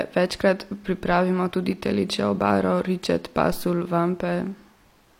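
Speech, about 5 seconds long, with one phantom power thump at 3.52 s, right after "tudi telečjo obaro ričet". It's a deep low thud lasting roughly 0.18 s, until 3.70 s, with the main energy dying away in about 41 ms. That's the classic sign of phantom or some other supply being switched on a live input. The sudden DC step gets through the coupling capacitors and comes out as a low-frequency bump.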